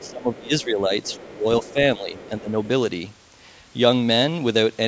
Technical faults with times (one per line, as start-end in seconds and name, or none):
0.00-0.42 other side's voice leaking through
0.04-0.91 speech suppressed in double talk
1.03-1.18 other side's voice leaking through
1.18-2.59 speech suppressed in double talk
1.64-1.73 other side's voice leaking through
2.14-2.29 other side's voice leaking through